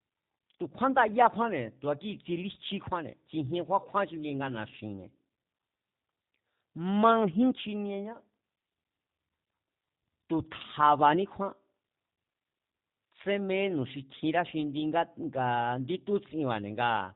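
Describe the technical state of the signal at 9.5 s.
At 9.5 s you're hearing G.729 coding, and it runs through the whole clip. The speech is rebuilt from a vocal tract filter plus a few pulses per frame, with nothing above 4 kHz. That leaves it plainly rough and synthetic, which fits an 8 kbit/s stream.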